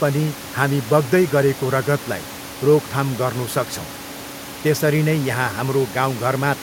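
No system faults are audible in this speech recording; the room noise heard underneath sits about 18 dB below the speech and belongs to the recording itself.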